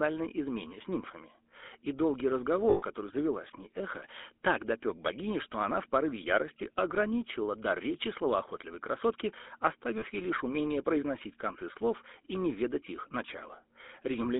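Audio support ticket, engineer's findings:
GSM full-rate codec, throughout. Buzzy, gravelly speech, plainly audible. Band limited to roughly 250 Hz to 3.6 kHz. Codec rebuilds the voice from a vocal-tract model driven by sparse regular pulses, which fits 13 kbps GSM full rate.

Lost GSM frames at 2.70 s, lasting 0.12 s, before "завела с ней эхо". Rough metallic ring holding the previous sound. Decoder repeats the last good frame, consistent with six 20 ms frames. Again at 9.98 s, 0.04 s, before "ей лишь умение произносить".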